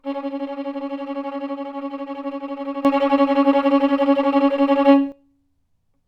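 At 2.85 s the level steps up by about 12 dB in an instant, a sudden gain jump that holds until 5.12 s, where it drops back just as abruptly. The likely cause is a digital gain setting applied without any ramp. What separates this from a sound source simply getting louder is that the background noise rises and falls by the same amount at exactly the same moments, with no gradual swell on either edge.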